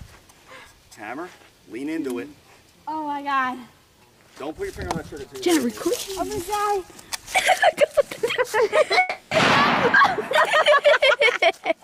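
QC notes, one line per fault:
8.99–9.33 s, long network dropout: likely a stall in packet delivery, so about 320 ms of audio never arrived and the receiver filled the gap by extending the last sound into a fading buzz, with no true silence, before resuming past the lost portion.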